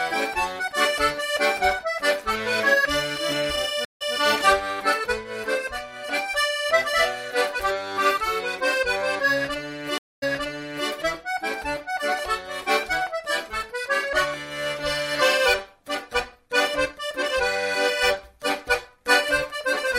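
At 3.85 s and again at 9.98 s there's a stream reconnect: 158 ms then 240 ms of silence, and the fresh decoder resumes about 0.15 s, then 0.66 s, earlier.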